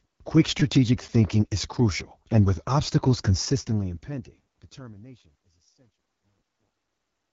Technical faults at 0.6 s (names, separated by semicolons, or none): AMR wideband (HD Voice) codec; repeated buffer